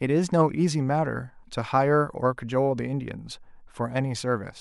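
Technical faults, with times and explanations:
Nothing in this speech recording stood out as a technical problem on listening.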